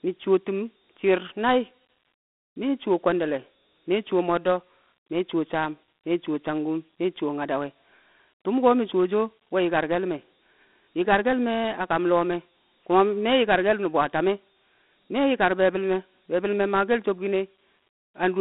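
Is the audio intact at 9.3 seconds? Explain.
No, not really. At 9.3 seconds, as everywhere in this speech clip, you're hearing Dialogic VOX ADPCM. The 4-bit coding at 32 kbps leaves a gritty hiss riding on the speech, and the phone-line band of about 200 Hz to 3.6 kHz cuts off everything above 3.9 kHz.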